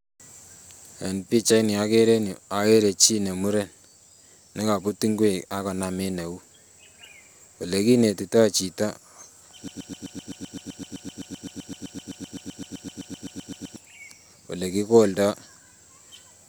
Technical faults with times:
9.68-13.76 broken-record loop

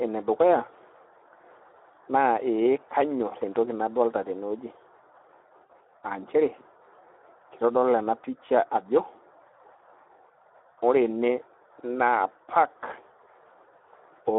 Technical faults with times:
0.00-14.39 Speex codec
5.66-5.71 VoIP packet loss concealed by the speech codec

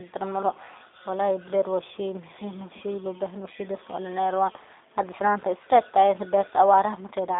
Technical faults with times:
0.00-7.39 G.729 codec

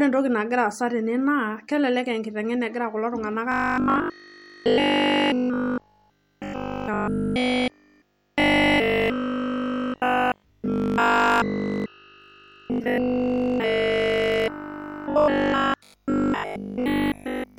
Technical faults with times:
3.52-17.58 robotic sound from repeated short buffers

